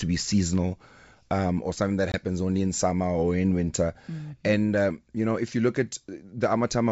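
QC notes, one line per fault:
2.12–2.20 s, packet loss on an ADPCM call: a hard-edged 20 ms hole, about one packet's worth, cuts the speech to silence. When sound resumes, the receiving decoder's adaptive predictor and step size no longer match the sender's, so the audio comes back slightly distorted. It settles within some tens of milliseconds after the hole as the decoder re-converges. The wideband path, which sounds like G.722 at 64 kbit/s, shows faint or no coding damage.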